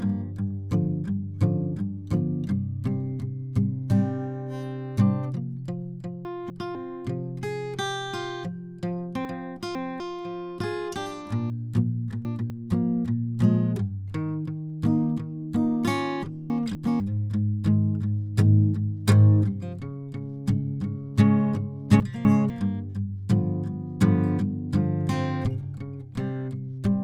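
The music jumbles briefly at 6.25–6.75, 9.25–10.0, 11.5–12.5, 16.5–17.0 and 22.0–22.5 s: chunks out of order. A 250 ms piece plays one to three slots late, so the passage scrambles at the hard joins, though nothing actually drops out.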